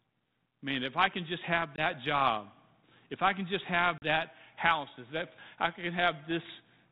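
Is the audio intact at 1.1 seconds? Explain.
Yes, the audio is intact at 1.1 seconds, with no fault at that moment beyond the light coding texture of the 32 kbit/s G.726 ADPCM path it passes through.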